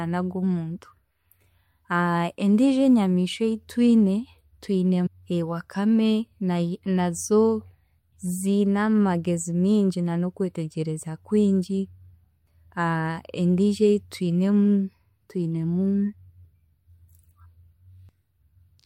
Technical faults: stream segment skipped

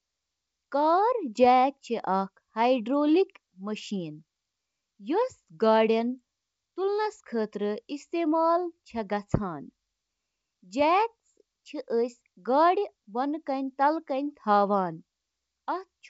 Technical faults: none

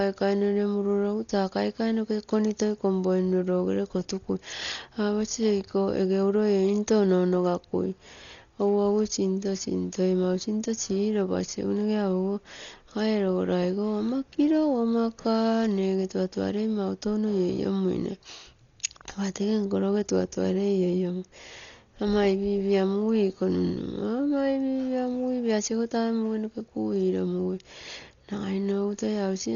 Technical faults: Dolby Digital compression

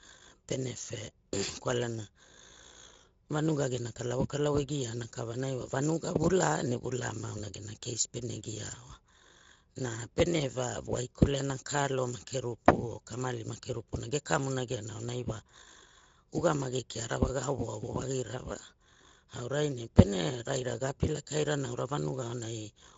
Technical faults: Speex codec

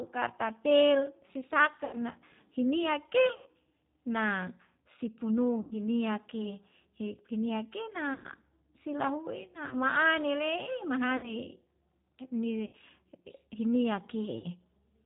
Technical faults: G.729 codec; VoIP packet loss concealed by the speech codec

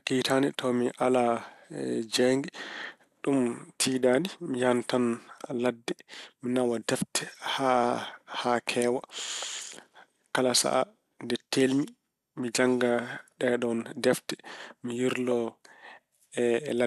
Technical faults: MP2 compression

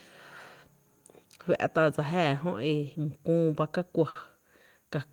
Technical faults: burst of packet loss

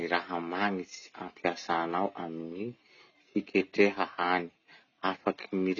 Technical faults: AAC compression

